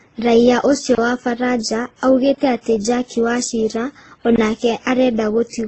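Right from the start, the whole thing has a dull, smeared quality with nothing above 8.3 kHz, and two different flavours of codec grit sit on top of each other. That's likely transcoding between lossy codecs, something like an old WMA encode then squeezed again into Opus.

Then there are three blocks of digital silence, at 0.95 s for 30 ms, 2.35 s for about 25 ms, and 4.36 s for 20 ms. The audio drops straight to silence and back with no fade, so each gap is a short hole.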